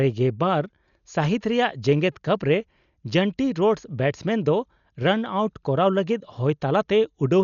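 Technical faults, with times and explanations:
Throughout, Dolby Digital compression: the speech sounds dull and heavily damaged. Nothing reaches above 7 kHz, and a rough, fluttering noise clings around voiced tones. This is likely AC-3 style coding starved of bits, with damage that fits a rate near 48 kbps. The encoder narrowed the band and left many frequency lines without mantissa bits, so the decoder filled them with dither noise. That grainy noise fill marks it apart from a plain low-pass filter.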